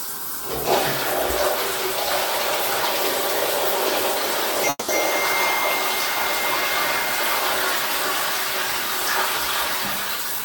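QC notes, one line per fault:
4.69–4.90 s, call audio freeze: the sound stops moving forward and the last moment is held as a short buzzy continuation that decays, reaching silence for about the final 30 ms of the 0.19 s gap. When it resumes, the audio picks up exactly where it left off, so nothing is lost but everything after is delayed by 190 ms. The likely cause is packets held up in transit, leaving the jitter buffer empty so the receiver had to fill in.
10.07–10.39 s, jitter buffer speed-up: the audio plays at about 115% of normal speed with pitch unchanged, giving a rushed, compressed feel over these 0.32 s. The receiver was carrying more buffered audio than its target, as happens after a backlog of packets arrives together, and trimmed it by repeatedly cutting out very short pitch-period-length slices. Around 50 ms of material is removed in total, which accounts for the hurried character.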